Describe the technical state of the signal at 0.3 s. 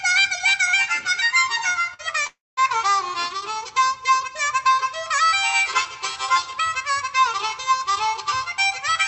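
At 0.3 s the signal is intact, with no fault present, only the ordinary band limit of the call path, whose codec stops the high end at about 8 kHz.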